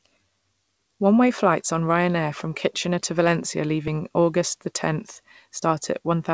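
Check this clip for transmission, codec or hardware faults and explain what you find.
Nothing here points to a transmission, codec or hardware problem; the speech simply came over a call path whose content stops at 8 kHz, which fits a wideband codec like G.722 doing its normal job.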